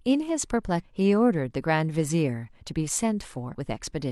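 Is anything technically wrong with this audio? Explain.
Yes, there are two short glitches from damaged data in a compressed stream, at 0.79 to 0.85 s and again at 3.49 to 3.55 s, each lasting around 50 to 60 ms. In both spots some of the coded bytes were corrupted, so the decoder couldn't make sense of those frames, lost sync and had to hunt for the next valid frame header. What you get is a quick glitch cutting into the speech rather than clean audio.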